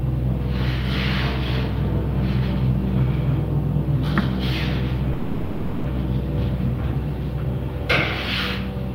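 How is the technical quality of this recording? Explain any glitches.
There is one glitch: a call audio freeze from 5.13 to 5.86 s. The last sound is stretched into a fading buzz or hiss for 0.71 s, likely because delayed packets drained the jitter buffer. Playback then resumes where it stopped, adding a gap without losing audio.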